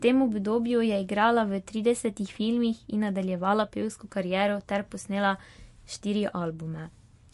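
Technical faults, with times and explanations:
Throughout, MP3 compression: nothing is heard above 11.3 kHz, and the speech has a plainly audible watery, swirling quality as faint detail flickers in and out from moment to moment, with metallic chirps on s sounds and smeared consonant attacks. The likely cause is a low-bitrate MP3 encode, consistent with around 50 kbps, where the encoder cuts the treble and zeroes weak frequency lines. A plain low-pass filter would dull the top without that flickering swirl.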